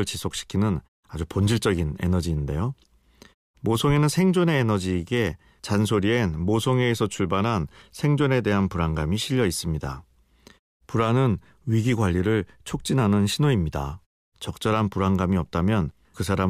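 No technical faults occur in the speech, so there are none to describe in time order.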